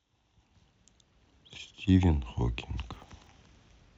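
From 2.93 to 3.27 s the speech breaks into a short burst of processor overload crackle. The processing could not keep up, so around twenty tiny buffers, each only a millisecond or two long, missed their deadlines and came out as silence with hard edges. Those rapid micro-gaps merge into a gritty tearing over the sound rather than one clean dropout, and it stops as soon as the load eases.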